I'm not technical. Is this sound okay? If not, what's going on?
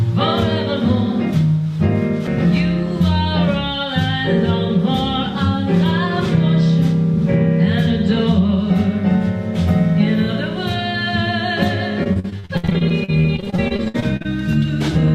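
No, there are two problems. At 2.27 s there's a CD skip: the player's laser gets knocked, or thrown by a flaw in the disc, onto a different turn of the disc, so you hear a tiny tick and almost no silence, and the sound carries on from a different spot, jumping forward or back.

Then from 12.03 to 14.26 s there's repeated packet loss, which gives a robotic sound. Chunks of audio kept going missing in transit, and each hole was patched by stretching the last bit of sound. About a third of that stretch is patched filler, with gaps up to 62 ms, so it sounds choppy.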